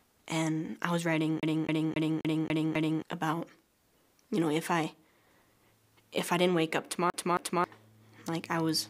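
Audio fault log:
1.40 to 3.02 s, CD stuck on one turn: the same 0.27 s slice repeats six times, each jump marked by a brief mute, as a scratch throws the laser back a track.
7.10 to 7.64 s, CD stuck on one turn: the identical 0.27 s loop plays twice, giving the quick, even stutter of the laser skipping back at the scratch.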